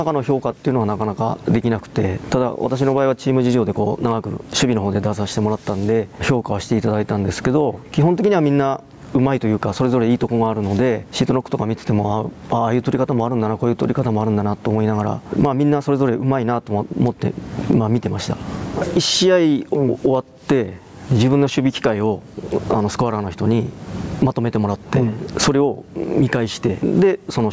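Gain pumping runs the whole way through: the gain swings by something like 20 dB, pulled down under each loud sound, so everything feels squashed. Likely the mic gain's set way too hot, with a fast limiter clamping it down each time.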